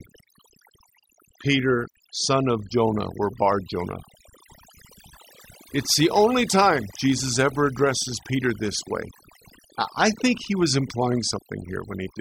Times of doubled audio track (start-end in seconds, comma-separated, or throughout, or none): none